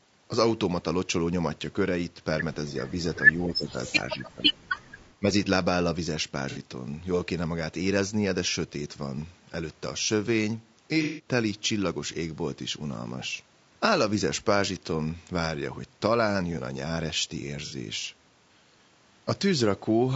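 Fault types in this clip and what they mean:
Low-delay AAC compression: The speech sounds rough and grainy throughout, with noise between harmonics. This is likely AAC-ELD coding, which fits about 32 kbps.
Echo leak: Faint, delayed copies of the voice, about 288 ms late, slip through briefly. The likely cause is a loudspeaker echo the canceller missed.
Speech suppressed in double talk: The voice dips by up to about 15 dB in places. It was likely turned down while both sides spoke at once.
AAC frame loss with concealment: Short smeared, noisy patches replace missing audio. The decoder filled these gaps from earlier sound, each lasting 60 to 150 ms.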